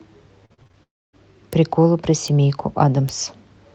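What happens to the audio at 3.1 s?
At 3.09 s the speech is hit by a bit error spike. A single flipped bit throws one sample's value off by a power of two, and it snaps straight back. The result is one sharp, broadband tick with no relation to the speech around it.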